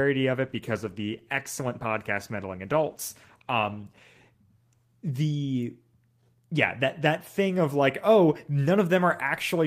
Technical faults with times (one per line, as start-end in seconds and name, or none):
0.42-5.37 call bitrate drop